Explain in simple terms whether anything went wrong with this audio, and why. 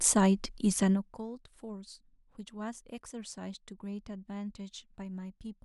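Nothing went wrong with this audio, since no fault can be heard anywhere in the speech.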